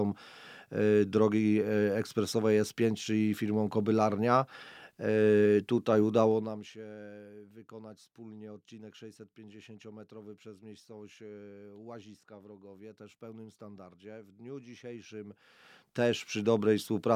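From 6.23 to 6.76 s, the level drops by roughly 20 dB with zipper noise. The gain falls in 1 dB steps rather than gliding, around fifty steps a second. Each jump puts a tiny click into the waveform. Together the clicks form a fast ticking, a zipping texture laid over the sound for the half second the level is falling.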